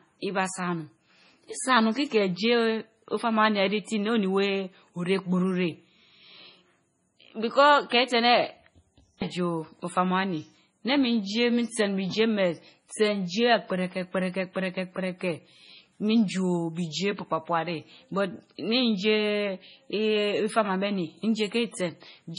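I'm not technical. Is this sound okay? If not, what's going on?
No, it's not quite right. The whole clip has that watery, swirly quality, with a dull top end because everything above 10.6 kHz is gone. That's likely heavy MP3 compression: the encoder ran short of data and dropped detail, so quieter bits flicker in and out.

There's also a pre-echo from 9.18 to 9.22 s, about 39 ms long. Just before a sharp sound starts, you get a brief hiss, and the attack itself sounds softened. The encoder's noise leaks into the quiet moment ahead of the hit.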